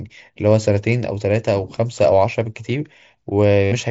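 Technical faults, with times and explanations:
3.64–3.72 s, concealed Bluetooth headset packet loss: about 75 ms of audio from the headset failed to arrive near the end of the clip, a gap that fits a run of around ten lost packets. The receiver covered it by looping the best-matching piece of the last 20 ms or so of waveform. Instead of silence there is a buzzy, steady tone held at full level, then a slight warble as real speech returns over the wideband mSBC link.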